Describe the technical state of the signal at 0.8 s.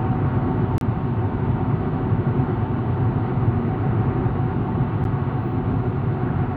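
At 0.8 s there is a Bluetooth stall from 0.78 to 0.81 s: the sound drops to about 31 ms of silence, likely because interference delayed wireless packets until the headphones' buffer emptied. It is a clean, complete gap, not a click, crackle or smeared distortion.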